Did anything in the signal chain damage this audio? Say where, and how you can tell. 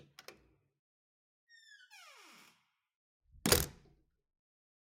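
No, nothing in the signal chain has left audible damage on this recording of sounds. I can't point to any stage, from the wiring through to playback, where the signal has been harmed.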